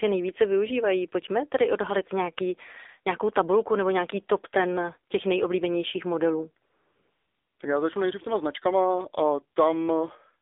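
Speech runs through AMR narrowband mobile coding for the whole clip. Nothing passes outside roughly 300 Hz to 3.7 kHz. The voice sounds plainly buzzy and synthetic, which fits a low rate near 7.4 kbps. From 6.66 to 7.60 s, AMR comfort noise takes over. For 940 ms the real background disappears, replaced by smooth, steady synthetic hiss that switches in and out.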